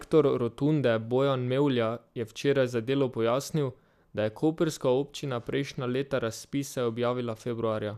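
No technical faults can be heard anywhere in this speech recording.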